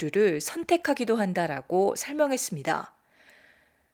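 Speech recording, no technical faults found.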